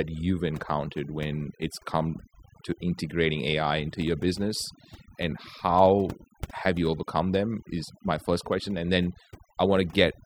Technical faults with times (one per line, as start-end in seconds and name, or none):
0.00-10.25 overdone noise removal